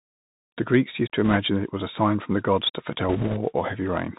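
Speech with a dull, boxed-in sound throughout: nothing above about 4 kHz comes through, s sounds are scratchy, loud bright moments distort, and a grainy hiss sits under everything. That is the Bluetooth CVSD headset codec, which sends one up-or-down bit per sample at a high rate, consistent with a 64 kbps link, while its step size adapts. Its limited band and lagging steps cause these plainly audible artefacts. Two bursts of rushing crackle cut in, from 1.25 to 1.37 s between "used to" and "that it was a", and from 3.09 to 3.38 s after "from the gods to". These are bit errors on a Bluetooth voice link, at a rate of a few percent. Because each CVSD bit carries only a small step, the flipped bits smear into noise that fades rather than producing loud clicks.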